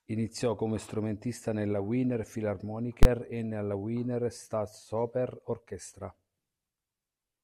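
A calculation in the processing chain produced invalid numbers at full scale: infinite or undefined values that were clamped to the maximum output level for one whole processing block. In this speech clip that happens from 3.03 to 3.05 s, just before "e nella". The block lasts about 21 ms, which fits a 1024-sample buffer. Because it is so short, the start and end pops merge into a single loud bang that replaces the audio at that point.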